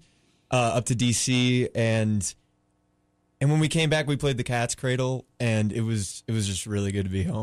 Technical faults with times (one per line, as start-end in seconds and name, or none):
none